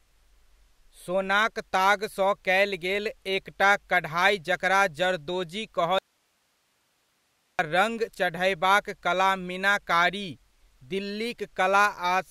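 From 5.99 to 7.59 s, right after "एकटा कढ़ाइ जकरा जरदोजी", an audio dropout to a faint residue cuts the speech abruptly, likely a lost signal on a still-live path. For 1.6 s only hiss remains, roughly 45 dB down, seen as a sharp-edged, near-empty band on the spectrogram.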